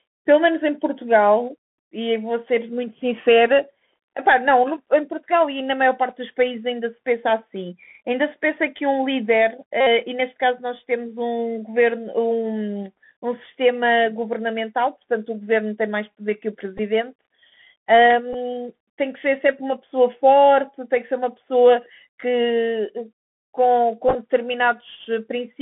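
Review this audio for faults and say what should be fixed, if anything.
The speech runs through a Bluetooth CVSD headset codec throughout. This one-bit delta coder works at 64 kbit/s and passes only about 150 Hz to 3.5 kHz. Its adaptive step lags loud high sounds. Sibilants turn scratchy over a granular hiss. To prevent it, use a wideband headset codec or a wired microphone.

Bluetooth headset packet repeated occurs at 9.81 to 9.87 s, 16.78 to 16.80 s, 18.33 s, and 24.08 to 24.15 s. Lost packets were replaced by the previous packet's bits. The 60 ms run at 9.81 s buzzes near 267 Hz, which fits about sixteen lost packets. The other events are shorter runs. The last is scattered, with runs of up to roughly 10 ms. To prevent it, keep the headset close to the phone with a clear radio path.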